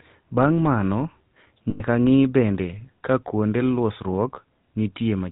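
Right from the start the speech has that GSM full-rate codec sound, and the damage is plainly audible. The vocal tract is modelled and driven by sparse, regular pulses, so everything gets a buzzy, gravelly edge and nothing above 4 kHz survives, which fits the old 13 kbps full-rate coder. At 1.7 s there's a burst of lost GSM frames running to 1.82 s. The decoder keeps repeating the last good frame's settings, so the sound freezes into a rough, metallic ring for about 100 ms, which matches roughly five 20 ms frames.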